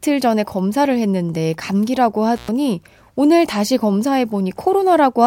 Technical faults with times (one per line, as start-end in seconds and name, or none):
2.36-2.49 intermittent contact